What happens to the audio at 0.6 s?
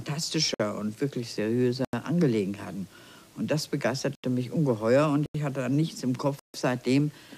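Right around there you get a block of digital silence, from 0.54 to 0.60 s, about 55 ms. The output simply drops to zeros and snaps back with no fade, leaving a short hole.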